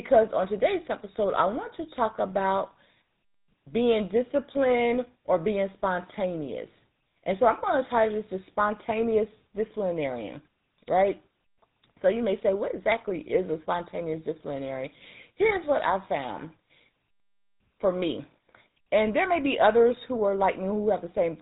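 From start to finish the speech carries GSM full-rate codec damage, plainly audible: a buzzy, gravelly roughness from pulse-driven vocal-tract modelling, consistent with a 13 kbps rate, and nothing above 3.8 kHz. A plain low-pass filter would only muffle the sound without adding this grit.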